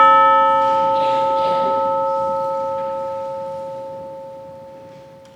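Nothing here stands out as a technical fault, with the audio carrying on the same way from its first moment to its last.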